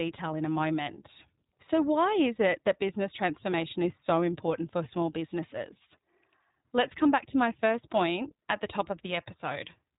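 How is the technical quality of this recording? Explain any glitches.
The speech is degraded by plainly audible codec damage for the whole clip. iLBC codec, throughout: each 20 ms frame is coded on its own and nothing above 4 kHz passes, so the speech sounds muffled, rough and synthetic, which fits iLBC's 15.2 kbps mode.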